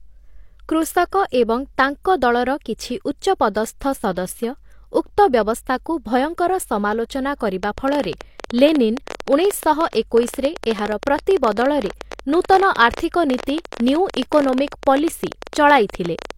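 From the start, the speech carries the artefacts of low-bitrate audio saved at a high bitrate. Nothing sounds above 16.3 kHz. The file is likely a re-encode: a heavily compressed source, fitting something like 32 kbit/s HE-AAC, later stored as high-rate MP3.

At 7.64 s, just after "ଭୟଙ୍କର ସମାଲୋଚନା", a train of clicks begins and runs to 16.32 s. About a hundred similar ticks arrive unevenly, near 13.8 per second, peaking around 10 dB above the speech. They are likely interference or a faulty connection.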